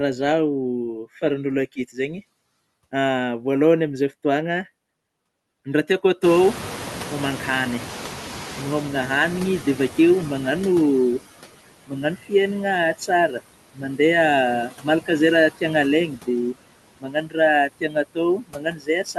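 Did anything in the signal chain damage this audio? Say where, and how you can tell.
Yes. Throughout, the background dips between phrases and swells under speech: noise suppressor artifacts from call processing, cutting the noise by about 16 dB.

From 6.23 to 10.82 s, the noise surges through before sinking: the noise suppressor catching up. Room noise jumps about 24 dB near 6 s, and the estimate takes about 4.6 s to adapt.

Syllables sound swallowed at 12.16, 13.75, 14.69 (before "izay raha tiana alaigna"), 17.0–17.37, 17.81 and 18.38 s to the end. This is speech cut by the noise suppressor, with drops of about 10 to 18 dB.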